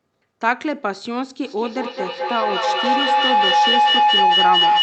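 From 1.44 s to the end of the speech, a feedback howl builds: a second device in the same room evidently picks up the loudspeaker output and returns it to the call with net gain on each trip. Instead of decaying, the repeats, coming roughly every fifth of a second, grow and narrow to a tone around 1 kHz, and peak about 7 dB above the speech. The audio's top end stops near 8 kHz, consistent with the Opus call codec's bandwidth.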